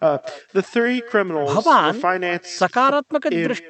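It's a speech clip with echo with no canceller running throughout: the far end's speaker feeds their mic, so each phrase returns roughly a fifth of a second later, about 18 dB down. It's all carried through a call codec that stops the top end around 8 kHz.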